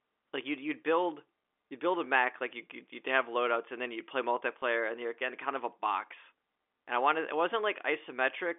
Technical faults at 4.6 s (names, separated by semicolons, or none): packet loss with last packet repeated